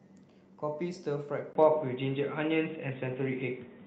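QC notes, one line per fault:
1.53 s to end, input switched to a poorer device: At 1.53 s the sound drops out for about 20 ms, then returns dull and boxy, with nothing above 3.8 kHz. Its level also shifts by roughly 5 dB, and it carries new background noise, roughly 40 dB below the signal. The narrowed band, the different tone and level, and the fresh noise floor point to the recording likely moving to another microphone or to a headset's call profile.
3.07 to 3.13 s, lost packet rebuilt from error correction: For about 40 ms the sound turns grainy and noisier but never breaks into a gap. That fits two lost packets in the Opus call path, each replaced by the low-bitrate copy carried in the following packet. The decoder played those coarse copies, so the stretch stays continuous but is audibly rougher than the audio on either side of it.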